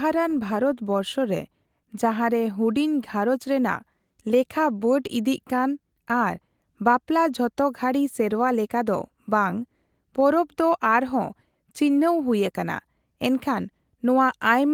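There are no technical faults to describe at any point in this speech clip.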